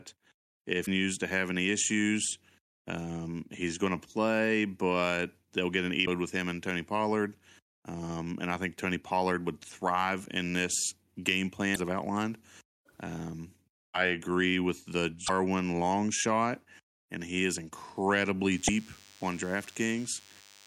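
Damaged data in a compressed stream breaks into this speech clip at 0.82 to 0.88 s, 6.02 to 6.08 s, 11.72 to 11.77 s, 15.24 to 15.30 s and 18.67 to 18.69 s, each a brief chirp or blip of roughly 30 to 55 ms. Corrupted bytes in those frames make the decoder misread them and lose sync until it finds the next valid frame header. DECT cordless phone buzz runs from 18.51 s to the end: a thin, steady 100 Hz buzz rich in harmonics, sitting well below the speech, produced when the audio circuitry rectifies a nearby handset or base station's radio bursts sent every 10 ms.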